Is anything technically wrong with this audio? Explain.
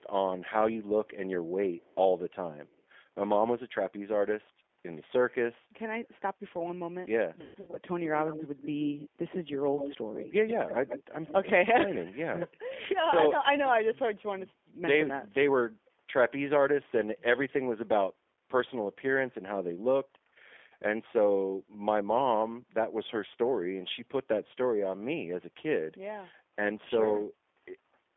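Yes. Several faults are audible.

Throughout the speech, G.729 codec damage is plainly audible. The coder rebuilds each 10 ms frame from a filter, a pitch predictor and a few pulses, which fits an 8 kbit/s stream. This makes the sound rough and synthetic. On a spectrogram, energy sits in a band from about 300 Hz to 3.4 kHz, with smeared harmonics.

From 0.0 to 0.08 s and from 1.81 to 1.95 s, a very faint copy of the speech trails it by about 158 ms. From 9.77 to 11.5 s, a much stronger copy follows at about 129 ms, only around 10 dB below the main signal. All three are likely an echo leak, where a far-end canceller let loudspeaker pickup return. On a spectrogram, this appears as a ghost of the harmonic pattern shifted later in time.

Between 7.41 and 7.78 s, VoIP packet loss concealed by the speech codec appears. About 220 ms is missing, scattered over 320 ms, with the longest gap at 140 ms. 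The decoder stretches the last frame into a fading buzzy tone or coloured noise, and the sound stays weak briefly afterward. The waveform shows a decaying, repetitive stretch, and the spectrogram shows frozen harmonic stripes.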